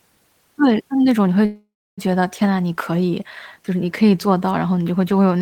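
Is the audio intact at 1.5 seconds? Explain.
No. From 1.45 to 2.00 s there is a call audio freeze, likely from packets stalling until the jitter buffer ran dry. The last sound is stretched into a fading buzz that goes silent for 0.28 s, then the speech resumes where it stopped, about 0.52 s late, with nothing lost.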